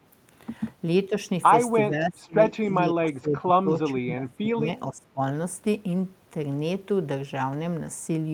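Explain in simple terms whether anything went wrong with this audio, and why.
The speech drops sharply in level at 1.89 to 2.41 s, 2.82 to 3.69 s, 3.93 to 4.67 s and 4.91 to 5.2 s. This is speech suppressed in double talk, likely an echo canceller turning down the talker while both sides spoke.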